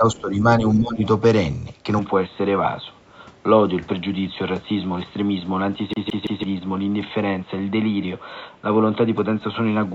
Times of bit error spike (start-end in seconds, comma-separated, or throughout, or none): none